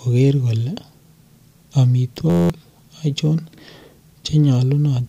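A speech clip with a system hang loop from 2.30 to 2.50 s. For about a fifth of a second the audio freezes into one 11.61 ms fragment that repeats exactly, 17 times over. This fits the sound hardware cycling a 512-sample ring buffer while the driver stalled. The short loop produces a steady buzz at 86.1 Hz. On a spectrogram it shows as evenly spaced horizontal harmonic lines on an 86.1 Hz grid. The waveform shows an identical repeating cell.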